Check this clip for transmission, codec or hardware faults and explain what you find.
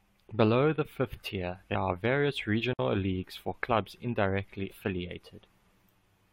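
Two kinds of fault are present in the speech: damaged data in the compressed stream, heard twice, and one digital wireless dropout.

Damaged data in a compressed stream occurs from 1.74 to 1.76 s and again from 4.70 to 4.72 s. Each time, a short run of the encoded stream is corrupted, so the decoder cannot rebuild those frames correctly and has to resynchronise on the next valid frame header. For about 20 ms the speech is replaced by a brief chirp or blip.

A digital wireless dropout runs from 2.73 to 2.79 s. For that stretch the radio link lost more data than its error correction could recover, and the receiver muted its output rather than pass on garbage. The result is a clean 60 ms hole of near silence, entered and left through a very short fade, with no hiss or noise burst on either side. That clean edge distinguishes it from the chirps of the corrupted stream.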